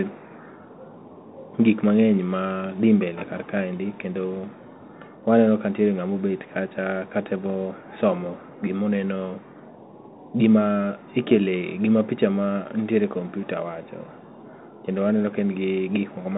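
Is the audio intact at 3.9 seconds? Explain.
No. At 3.9 seconds, as throughout, the speech passes through a Bluetooth CVSD headset codec, consistent with a 64 kbps link. One-bit up/down steps with adaptive size leave plainly audible scratchy sibilants and granular hiss. A spectrogram shows a hard ceiling near 3.8 kHz above a grainy noise floor.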